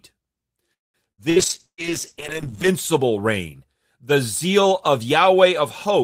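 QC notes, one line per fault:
0.73–0.97 s, call audio freeze: The sound stalls. The last instant is briefly drawn out, then about 0.19 s of silence, and it resumes exactly where it stopped with nothing lost. This likely comes from packets held up in transit until the jitter buffer ran dry.
1.12–1.21 s, 1.30–1.39 s and 1.66–1.81 s, burst of packet loss: Each is a short fading buzz or hiss, then a jump forward. About 60 ms is missing in each of the first two and about 120 ms in the third, which drops to silence partway through. The receiver stretched the last sound over packets that never arrived.
1.40–2.80 s, call bitrate drop: The speech turns rough, watery and dull, sitting at its worst for about 1.3 s until clarity returns just before "reign the zeal of". The encoder was pushed from 32 down to 8 kbps, coarsening the coding and cutting the highs.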